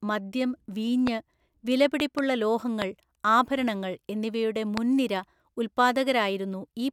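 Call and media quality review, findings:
Loud pops over the speech at 1.07–1.09 s, 2.00–2.21 s (double pop), 2.82–2.84 s before "ആഭരണങ്ങൾ എന്നിവയുടെ" and 4.77–4.80 s after it. Sharp thumps roughly 15 dB over the speech, the last near 20 dB. Likely switch, static or driver voltage spikes. Speech continues underneath.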